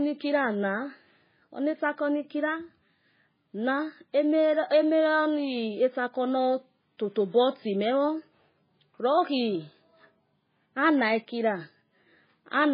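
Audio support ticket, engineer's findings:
Whole clip, speech. Watery, swirling texture; sibilants chirp and smear; no content above 5 kHz. Likely MP3 compression, heavy encoder damage. Encoder starved of bits: treble cut at fixed 5 kHz, weak spectral lines switching on and off frame to frame. Damage level fits a very low bitrate, around 16 kbps.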